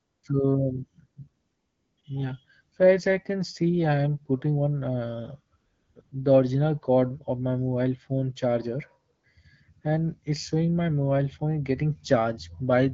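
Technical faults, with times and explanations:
0.00–0.23 s, 1.45–1.97 s, 2.01–2.03 s, 5.57–5.95 s, 6.01–6.11 s and 9.15–9.23 s (just before "and it's showing my"), AMR comfort noise: the phone stopped sending speech frames during pauses in the speech, so the receiver generated a smooth synthetic hiss from a rough level-and-spectrum description. The real background disappears, and the steady substitute switches in and out. On a spectrogram these gaps show as flat, evenly smeared noise bands with abrupt edges. On the waveform they appear as uniform low-level fuzz with sharp boundaries. The HD Voice coding of the speech itself sounds clear, with only light damage.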